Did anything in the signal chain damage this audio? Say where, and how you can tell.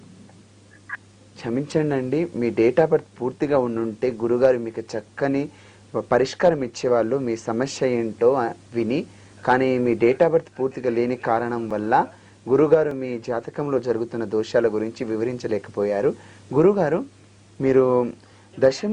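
Yes. A likely dropped buffer (overrun) at the driver or buffer stage: unread samples were overwritten, so at 11.71 s and 12.91 s a few milliseconds vanish with a jump.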